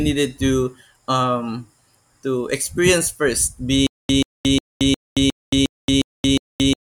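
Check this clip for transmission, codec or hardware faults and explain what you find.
One fault is present. Stutter with silent gaps runs from 3.87 s, right after "to experience first", to the end. The stream likely stalled, replaying its last fragment at each retry before running dry. A 134 ms burst returns eight times, each followed by 224 ms of digital silence, on an even 358 ms cycle, and the speech that should have followed is lost.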